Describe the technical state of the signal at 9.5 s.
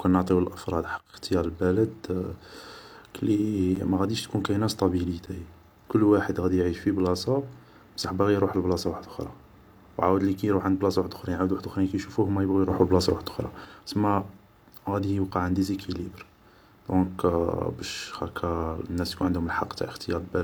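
At 9.5 s the speech signal is intact, with no audible fault at that moment.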